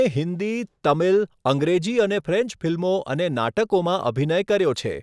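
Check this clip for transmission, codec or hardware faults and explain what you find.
I found no faults in this clip to explain.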